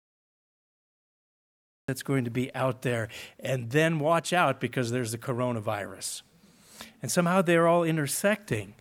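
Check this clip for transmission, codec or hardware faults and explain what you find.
There is one fault, a cut-off start. The audio is digital silence from 0.0 s until 1.88 s, and then it begins abruptly in the middle of a sound. Capture or streaming began after the source was already running, so the first moment kept is wherever the audio happened to be at that point. That is why there is no natural attack or fade-in. Instead of building up from nothing, the sound appears at full level, and the step from silence to signal at 1.88 s gives a hard, sudden onset.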